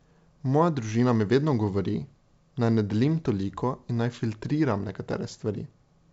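No technical fault can be heard in the speech. It has come through G.722 wideband telephone coding at 64 kbit/s, which keeps the speech bandwidth out to about 7 kHz, and any coding damage is faint at most.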